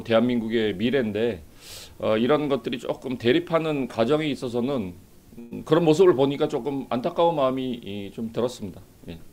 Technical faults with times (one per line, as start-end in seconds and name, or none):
5.39-5.53 burst of packet loss